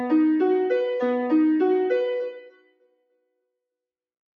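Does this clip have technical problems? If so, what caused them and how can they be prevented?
Yes. A noise suppressor applied to music or sounds runs throughout, treating sustained sound as noise. Levels swing by around 15 dB, with attacks intact and tails sinking, which sets it apart from compressor pumping. Disable speech-oriented noise suppression whenever non-speech audio is captured.

Sound is cut by the noise suppressor from 2.32 to 3.24 s, dropping by up to about 19 dB while onsets survive, unlike a dropout, which silences everything. Set the suppressor to a music or bypass mode.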